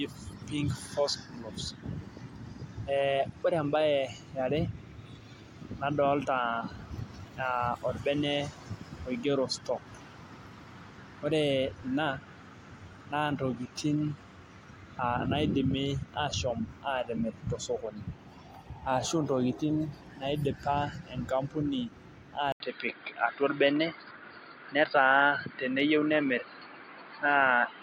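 Input switched to a poorer device at 22.52 s, likely a change of microphone or headset profile. After an 80 ms silence, the speech runs to the end with nothing above 4.8 kHz, sounding duller and boxier, a few decibels different in level, over a faint new noise floor.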